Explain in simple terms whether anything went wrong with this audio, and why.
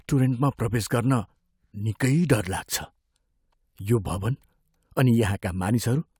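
Nothing went wrong here; the recording comes through steady and intact, with no glitches, dropouts or odd sounds anywhere along the way.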